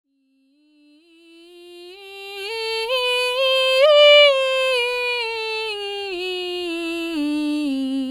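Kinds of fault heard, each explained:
No faults can be heard in this music.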